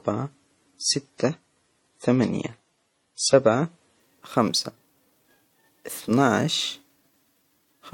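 Adaptive stream starting at a low bitrate: until 4.0 s the player's thin version strips the speech of everything above 11.3 kHz, then quality jumps with no gap.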